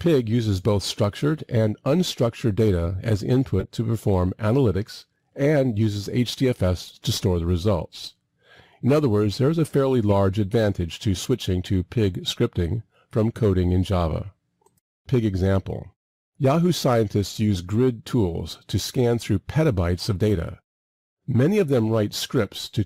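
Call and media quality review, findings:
Corrupt frame decoded: short glitches at 3.60–3.65 s, 10.10–10.13 s and 17.55–17.59 s, each spanning a few codec frames. The decoder played damaged frames as misplaced spectral energy rather than concealment smear.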